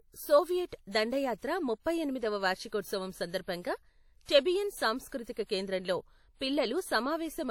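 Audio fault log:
Throughout: WMA compression. The speech carries a ringing, washy smear and a hiss that swells and fades with the level of the voice, the sign of quantisation noise spread across long transform blocks. Some weaker spectral detail sounds hollowed out where quiet components have been dropped, and nothing is present above 19 kHz. The damage is plainly audible, likely from a Windows Media Audio encode, and its degree fits a bitrate around 48 kbps.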